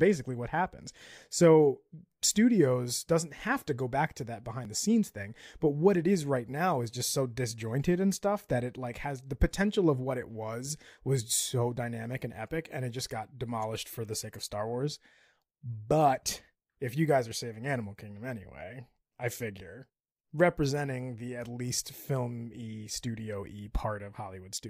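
No technical faults are audible.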